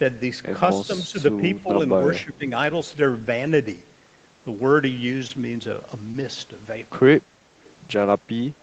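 At 1.62 to 1.68 s and again at 2.24 to 2.46 s the speech dips by about 10 dB, which is likely speech suppressed in double talk. These are level ducks lasting tens to hundreds of milliseconds. At 5.27 to 5.31 s and 6.11 to 6.16 s, short concealed packet loss covers about 20 ms each time with synthesised continuation, heard as a brief smear rather than a drop in level.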